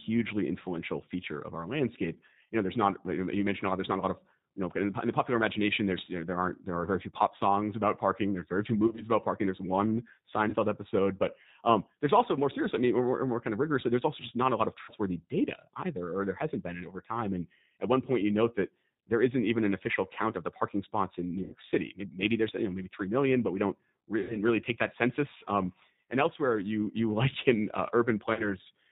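Throughout, the speech sounds slightly rough, synthetic and dull, with nothing above 4 kHz. This is G.729 codec damage: at 8 kbit/s, speech is rebuilt from a filter, a pitch predictor and a few pulses. At 8.87 to 9.02 s, VoIP packet loss concealed by the speech codec turns short stretches into a buzzy tone or coloured noise that fades, with about 50 ms lost in bursts scattered over 100 ms. The decoder stretched its last pitch and filter while lowering the gain. The same stretched, fading sound recurs at 10.49 to 10.56 s before "episode but um there's", with about 40 ms lost, and at 14.82 to 14.92 s after "not a lot of", with about 60 ms. It returns at 21.43 to 21.55 s and at 24.21 to 24.37 s, between "but we don't we" and "really take that census", each with about 90 ms lost. The last is at 28.34 to 28.52 s, with about 30 ms lost.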